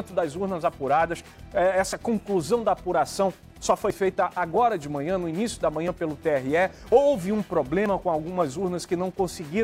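Audio missing between chunks at 1.93, 3.90, 5.88 and 7.86 s: brief skips, likely lost chunk handovers, repeat every 2 s, each dropping roughly 20 ms, abruptly joined.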